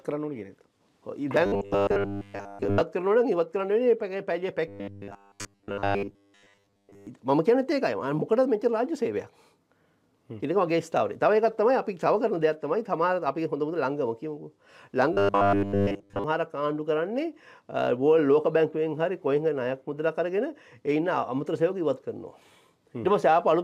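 Robotic sound from repeated short buffers hits at 1.46 to 2.82 s, 4.68 to 7.07 s and 15.13 to 16.24 s: a stiff 100 Hz metallic buzz, likely from audio arriving too seldom so roughly 10 ms chunks get looped, covering most of the first stretch and all of the others.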